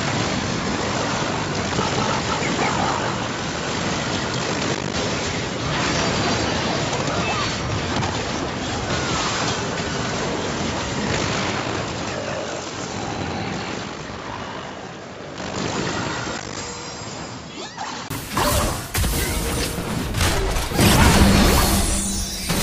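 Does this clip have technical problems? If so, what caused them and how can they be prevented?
Yes. From the start to 18.1 s the sound is dull and boxy, then it abruptly opens up, with a short silence of about 20 ms at the change. This is the pattern of an input switched to a poorer device, likely a fallback microphone or a headset call profile. During that stretch nothing reaches above 7.6 kHz, the level sits roughly 10 dB lower, and a different background hiss lies far beneath the signal, around 55 dB down. On a spectrogram the first 18 seconds show a hard ceiling at 7.6 kHz that lifts suddenly at 18.1 s, marked by a thin vertical gap; the waveform grows visibly taller there. To prevent this, lock the recording to one chosen input device and disable automatic device or profile switching before recording.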